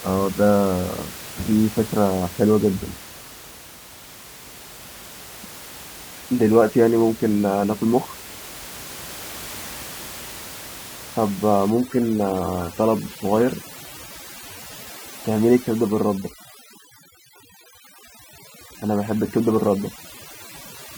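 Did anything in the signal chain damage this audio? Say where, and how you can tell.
Yes. From 11.7 s to the end, overdone noise removal in the call processing stage strips the room noise (about 18 dB below the speech before that point) down to near silence with twinkly specks. Quiet parts of the speech go with it because the suppressor is killing quiet bands it mistakes for noise.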